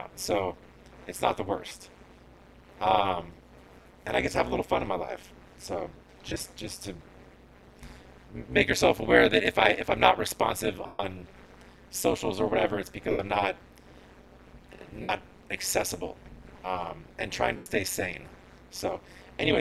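The audio carries overlap-add ripple throughout: the level swings by about 60 dB around 200 times a second, a metallic buzz with extra tones around each note from windowed frames rejoined with an overlap whose gains never sum flat. Unlike amplitude tremolo from a modulator, its rate is locked to the frame hop. Lost LE Audio frames smear the sound into noisy hash at 1.66–1.74 s, 3.81–3.85 s, 6.29–6.43 s, 10.86–10.99 s, 13.11–13.19 s, 15.02–15.09 s and 17.56–17.66 s. The first and third are broken into scattered runs of up to roughly 20 ms. The gaps fit 7.5 ms LC3 frames whose spectrum is repeated with random signs and faded, so the longest, 135 ms at 10.86 s, sinks toward silence instead of clicking or dropping out abruptly.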